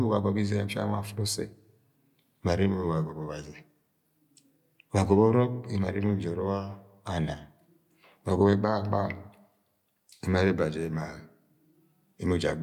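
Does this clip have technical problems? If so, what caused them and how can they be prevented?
No, nothing here points to a technical fault, so there is no cause to trace and nothing to prevent.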